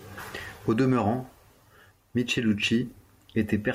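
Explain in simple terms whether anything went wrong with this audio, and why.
Nothing went wrong with the recording: the speech comes through steady and intact, with no technical problems to be heard anywhere in it.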